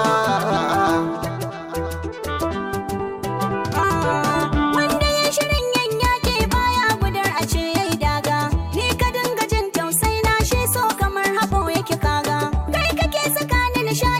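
No technical faults can be heard anywhere in the recording, and the signal keeps its continuity throughout.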